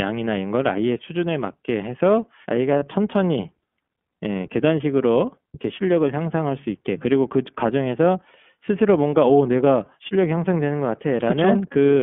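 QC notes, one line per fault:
throughout: iLBC codec. The audio sits in a narrow telephone band of roughly 200 Hz to 3.4 kHz, and the codec damage is plainly audible as a rough, slightly synthetic edge on the speech. The 30 ms framing fits iLBC's 13.33 kbps mode, where every frame's excitation is coded independently.
2.78–2.83 s: lost iLBC frames. About 30 ms drops out, consistent with a single missing frame. The decoder fills it by repeating the last pitch cycle with some noise mixed in, so you hear a brief buzzy, held-vowel smear. Because frames stand alone, it recovers right after.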